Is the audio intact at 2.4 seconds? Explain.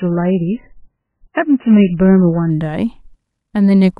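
No. At 2.4 s the speech is still inside an adaptive stream starting at a low bitrate, from 0.0 to 2.5 s. Nothing above 3 kHz and stronger codec artefacts point to a very low-bitrate MP3 start. Unlike a fixed low-pass, the treble returns abruptly at 2.5 s, without any gap.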